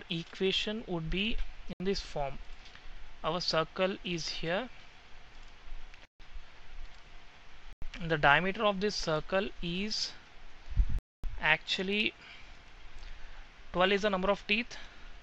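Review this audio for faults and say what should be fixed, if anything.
The sound drops to dead silence four times, at 1.73 s for 71 ms, 6.05 s for 145 ms, 7.73 s for 92 ms and 10.99 s for 251 ms, then picks up again. This is likely a Bluetooth stall: interference held back packets until the headphones' buffer ran empty. Keeping the phone close to the headphones and away from crowded 2.4 GHz traffic would prevent it.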